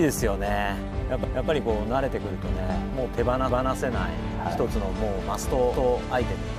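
At 1.24, 3.49 and 5.74 s, the sound stutters. These are overlapping chunks. The audio was handled in 2-second blocks, each starting 250 ms before the last ended. So a quarter-second plays twice at every join, heard as a regular repeat.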